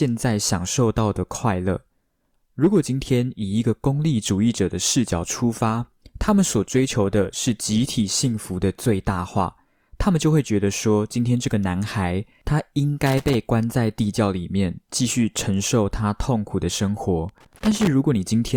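From 5.44 to 9.44 s codec artefacts rise suddenly with no gap, an adaptive stream at a lower bitrate, consistent with Opus stepping from 64 to 32 kbit/s. At 13.06 to 13.35 s and 17.29 to 17.87 s, irregular scratchy bursts mark loose connector crackle, a contact chopping the signal, unlike evenly spaced digital clicks.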